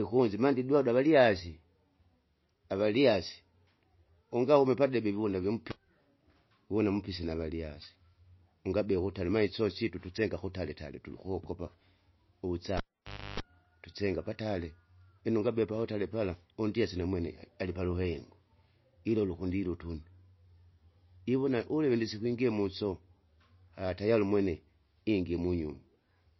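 Throughout, the audio was likely squeezed through MP3 compression at a very low bitrate, around 26 kbps. The encoder discards everything above 5.8 kHz and drops weak frequency lines that flicker from frame to frame, so the speech sounds dull and watery with a plainly audible swirl.

At 12.77 s a live cable is pulled and plugged in. It pops and the signal collapses for about 0.58 s, including roughly 0.31 s of 50 Hz mains buzz while only the tip makes contact. A second pop at 13.40 s marks the sound's return.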